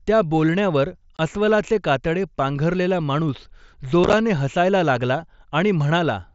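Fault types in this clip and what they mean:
Unconcealed Bluetooth headset packet loss: lost headset packets left unfilled gaps, a sharp 22 ms dropout at 1.17 s and choppy crackle from 4.04 to 4.13 s.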